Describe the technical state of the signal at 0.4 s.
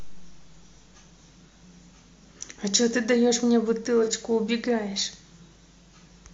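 At 0.4 s the speech signal is intact, with no dropout, distortion, glitch or other technical fault audible at that moment.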